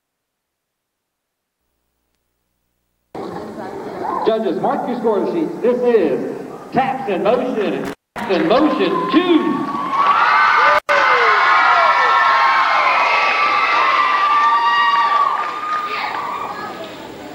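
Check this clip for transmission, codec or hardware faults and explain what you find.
There's a hardware fault here: two dropouts from an intermittent contact. The first runs from 7.85 to 8.24 s, with the line open for about 228 ms. The second runs from 10.75 to 10.90 s and is open for about 103 ms. A loose plug or cable conductor briefly loses contact, so the audio drops out and only faint hiss remains until the connection closes again. You can hear crackle at the edges of each gap, where the contact makes and breaks.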